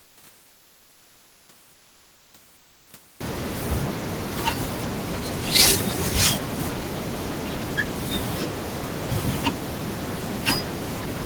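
From 1.75 to 2.29 s, and again from 2.59 to 2.83 s, the room noise, sitting about 27 dB below the speech, drops out and is replaced by a smooth, featureless hiss, about 1 dB and then about 2 dB quieter than the real background. This is comfort noise in place of the background, likely from discontinuous transmission of the kind Opus DTX uses: the sender pauses when it detects no speech, and the receiver fills the gap with synthetic noise.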